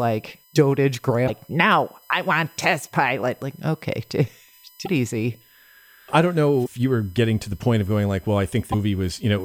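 Current drawn by a USB bus in 1 ms frames is leaking into the audio through the power or ground path, producing USB whine across the whole clip. It sits under the speech as a steady, fixed-pitch tone built on 1 kHz and its multiples, with the strongest component up at 12 kHz. It stays roughly 35 dB below the speech, so it is easiest to hear in the gaps between phrases.

At 1.27, 4.85, 6.65 and 8.71 s, the audio jumps forward and a brief 30 ms disturbance follows, most likely from a broken MP3 bit reservoir. When MP3 frames of about 26.1 ms are lost, the next frame looks back for data it had stored in earlier frames and decodes bytes that belong to a different frame instead. Each spot comes out as a short chirp, burst of noise or dropout that breaks the flow of the speech.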